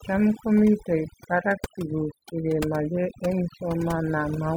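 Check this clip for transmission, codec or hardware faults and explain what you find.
One processing fault runs through the whole clip. Overdone noise removal, throughout: an over-aggressive noise reducer cuts frequency bands near its noise estimate, leaving twinkling near-silence and taking quiet parts of the speech with it.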